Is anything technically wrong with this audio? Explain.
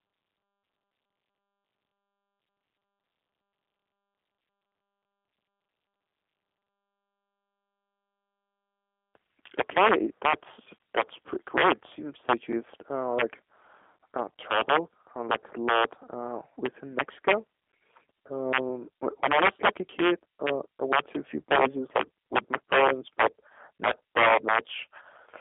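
Yes. Throughout, the speech carries G.729 codec damage: rebuilt from a filter, pitch predictor and sparse pulses, it sounds rough and synthetic, consistent with 8 kbit/s coding. A spectrogram shows nothing above 3.7 kHz.

At 21.15 to 21.17 s, a single loud pop, likely from a sudden voltage step, sits roughly 20 dB above the speech and appears as a sharp waveform spike.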